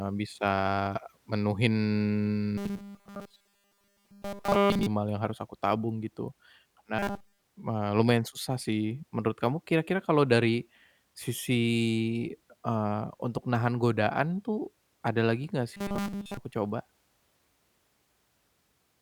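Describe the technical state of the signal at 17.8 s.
At 17.8 s the speech signal is intact, with no fault present at that moment.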